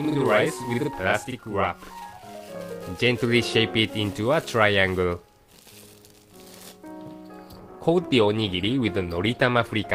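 From 0 to 2.55 s there is a channel delay (doubling): one channel runs about 42.7 ms behind the other, which fits a 2048-sample buffer, and the mono sum plays both. Unlike reverb, there is one distinct slap copy at full level, with no decaying tail.

At 7.43 s the sound switches abruptly to a lower-bitrate adaptive stream, which points to a drop from about 64 to 16 kbit/s Opus, and stays there to the end. Codec artefacts rise. No gap or dropout precedes the change, so this is not a buffering stall.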